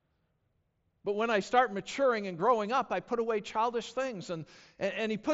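No technical faults can be heard in this speech recording. The speech comes through a Bluetooth mSBC headset link, with nothing above 7.7 kHz and a light trace of the codec's usual coding texture.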